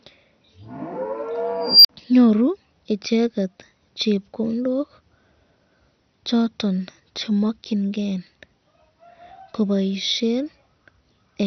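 MP2 compression runs from the start to the end: the audio sounds dull and gurgling, with granular distortion as upper sub-bands flicker on and off and the remaining bands are coarsely quantised, likely from MPEG Layer II encoding at a low bitrate near 48 kbps.

An unstable filter fault runs from 1.61 to 1.89 s. A recursive filter's output grows without limit, so a squeal around 5 kHz swells over about 0.23 s and clips. The numbers then overflow, leaving roughly 47 ms of silence before the filter resets.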